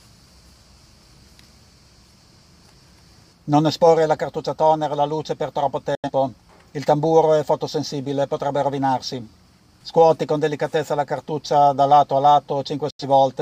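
Digital broadcast dropouts occur at 5.95 to 6.10 s and 12.90 to 13.04 s. Each time, the receiver mutes with a 3 ms fade when frames fail, then resumes later in the programme. The roughly 85 ms of audio skipped fits two lost frames.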